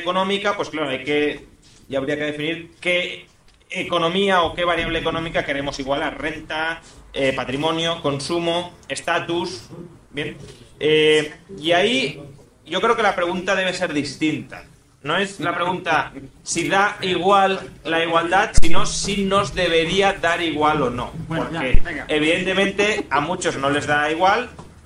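Two phantom power thumps, at 18.58 s and 21.75 s, are low, deep bumps peaking near about -1 dBFS and decaying over 84 ms and 25 ms. They come from a supply step passing through the input coupling capacitors.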